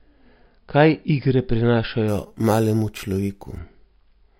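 From 2.08 s to 3.58 s the speech gains a bright, metallic fizz, about 23 dB below the voice, that rises and falls with it. This is imaging from sample-and-hold upsampling, which likely stems from unfiltered sample repetition from roughly 11 kHz, mirroring the spectrum into the 5.5 kHz to 11 kHz band.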